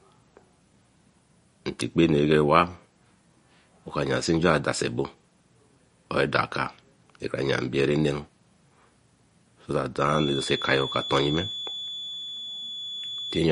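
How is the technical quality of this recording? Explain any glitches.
The recording has clearly audible technical flaws: a watery, band-limited sound throughout, and a whistle near the end.

Throughout, the speech sounds swirly and watery, with chirpy sibilants and nothing above 10.6 kHz. This is likely MP3 compression at a low bitrate, which fits about 40 kbps. Short of bits, the encoder cuts the treble and drops weak frequency lines that flicker between frames.

From 10.04 s to the end, a thin, steady 3.4 kHz whistle sits roughly 10 dB below the speech, swelling and fading slowly. This is likely a feedback whistle: the loudspeaker-to-microphone loop is held just at the point of feedback, so one frequency rings on without running away.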